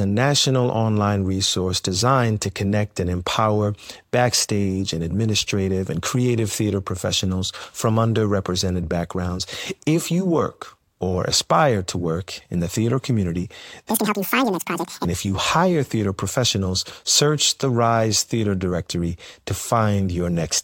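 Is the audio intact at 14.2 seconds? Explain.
No. From 13.90 to 15.05 s, just after "in the theater community", the audio is read two samples at a time. The speech plays at double speed and an octave higher, with its harmonics on a spectrogram spaced twice as widely.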